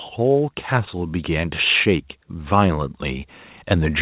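From 0.16 s to the end, the speech and the background swell together steadily: automatic gain rising, as the gain control judged the input too quiet and kept lifting it.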